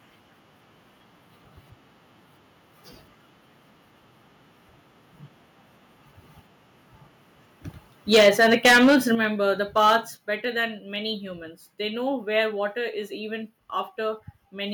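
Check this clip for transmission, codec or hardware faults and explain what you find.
Two related faults appear, both in the second half of the speech. They interact with each other.

Microphone overload occurs from 8.13 to 8.96 s and from 9.77 to 9.96 s, just before "better than many humans". Peaks run about 13 dB and then about 5 dB past the converter's limit. The likely cause is input volume set too high, so the converter flattens the waveform tops. Roughly a sixth, then a few percent, of samples are cut. Loud syllables turn harsh and crackly.

Microphone volume stepped down happens three times: at 8.15 s by about 2 dB, at 9.15 s by about 8 dB, and at 10.17 s by about 5 dB, just before "better than many humans". The likely cause is call software reacting to the clipping by lowering device gain. Voice and background drop together, abruptly, with no fade.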